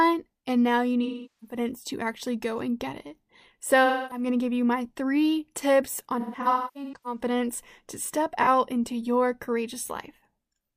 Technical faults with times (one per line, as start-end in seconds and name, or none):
1.03-1.57 AAC frame loss with concealment
3.85-4.25 AAC frame loss with concealment
6.20-7.20 AAC frame loss with concealment
8.42-8.48 AAC frame loss with concealment